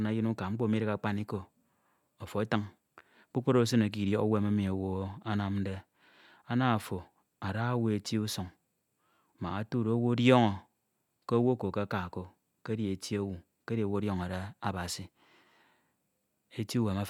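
No technical faults are audible anywhere in this speech recording.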